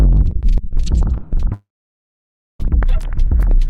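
From 1.53 s to 2.61 s the audio drops out for about 1.06 s, the pattern of a long network dropout, likely caused by packets failing to arrive. The last sound is carried on briefly as a decaying buzz or hiss, then about 0.94 s of silence fills the rest of the gap. When the signal resumes at 2.61 s, it picks up further along, with that stretch of material missing rather than delayed.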